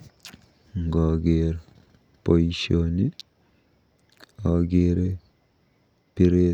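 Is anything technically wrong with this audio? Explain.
No, nothing technically wrong turns up in this speech recording on listening.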